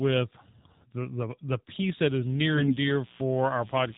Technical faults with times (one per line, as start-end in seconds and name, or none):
0.00-3.97 AMR narrowband mobile codec
2.25-3.97 mains buzz
2.54-2.74 AMR bit errors